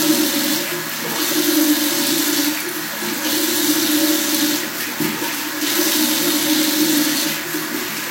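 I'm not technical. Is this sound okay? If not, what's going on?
No. This is low-bitrate audio saved at a high bitrate: the sound was likely squeezed into a small, heavily compressed file first and later re-saved as a much larger MP3. Enlarging the file can't bring back what the first squeeze threw away. Throughout the clip, nothing is heard above about 16.3 kHz, so the sounds lose some of their top-end sparkle and air, and the larger file doesn't improve on the smaller one.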